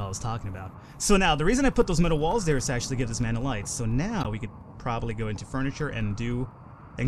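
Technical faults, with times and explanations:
1.62 to 7.01 s, periodic USB or driver dropouts: a tiny slice of audio, roughly a tenth of a millisecond, goes missing about every 0.1 s, some fifty times in all. Nothing fills the gaps; the stream simply skips ahead, so each loss leaves a small discontinuity in the waveform. That jump is heard as an evenly spaced tick, about ten per second, the steady rhythm of a background task repeatedly blocking the bus or the audio driver.
4.21 to 4.27 s, corrupt frame decoded: for about 56 ms, roughly two compressed frames' worth, the decoder played data whose bits had been damaged. Misread gains and codes put energy at frequencies that do not belong to the surrounding sound, producing a short chirp or burst of noise peaking at about -15 dBFS. Because the error spans only those frames, the artefact starts and stops abruptly rather than fading in.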